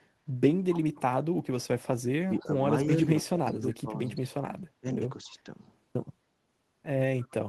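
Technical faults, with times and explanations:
0.74–0.80 s, 2.39–2.44 s, 7.22–7.32 s: echo leak. Brief delayed copies of the speech about 271 ms late, about 15–30 dB down, likely from residual echo the far-end canceller missed.
2.26–2.58 s, 2.96–3.09 s, 3.27–4.37 s, 4.81–4.97 s, 5.25–5.47 s: speech suppressed in double talk. The speech dips by roughly 5–25 dB, most deeply at 3.27–4.37 s, likely because the echo canceller attenuated it during overlapping talk.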